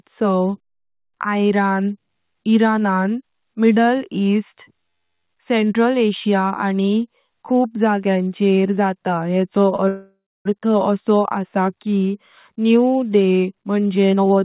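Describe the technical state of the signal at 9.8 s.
At 9.8 s the signal is just leaving a short stall from a late packet, which runs from 9.76 to 9.80 s. A packet arrived late, the jitter buffer ran dry, and the receiver stretched the last sound by 20 ms before resuming at the same point, so nothing is lost. It is heard as a briefly held sound with a faint buzz. On a spectrogram the bands below the 4 kHz ceiling of the G.711 path run flat and smeared for that sliver, and the waveform shows a short, repeated cycle.

Right after, from 9.88 to 10.47 s, comes a call audio freeze, likely caused by packets held up in transit that emptied the jitter buffer again. The receiver fills 572 ms: the last sound continues as a fading buzz, then about 260 ms of silence, before the audio picks up where it stopped with nothing missing. On a waveform this is a decaying tail into a flat line. On a spectrogram it shows as horizontal streaks fading to a blank gap.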